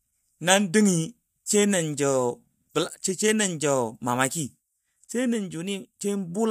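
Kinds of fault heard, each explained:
No technical fault can be heard anywhere in the speech. There is nothing to list or explain for this clip.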